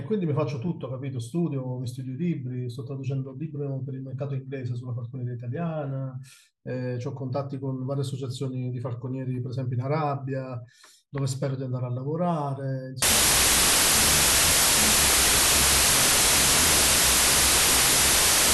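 From 13.02 s to the end at 18.53 s there's a wrong sample width fault. The sound turns to loud noise with the speech buried inside, running at half speed and an octave low. That fits 32-bit samples being read as 16-bit: each sample splits into two values, and only the upper halves carry the real signal.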